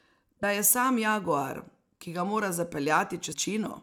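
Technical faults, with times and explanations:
0.42 s and 3.32–3.34 s, damaged data in a compressed stream: two very brief glitches cut into the speech, each under a few hundredths of a second. Corrupted bytes in the encoded stream make the decoder misread those frames, lose sync and hunt for the next valid frame header. A garbled chirp or squawk from misdecoded frames is what distinguishes this fault from a plain dropout or packet-loss gap, which sounds like silence or smeared repetition.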